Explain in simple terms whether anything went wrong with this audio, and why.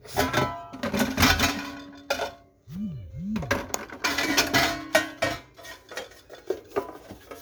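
Nothing went wrong with this recording of sounds. There is no moment in it where a technical problem can be heard.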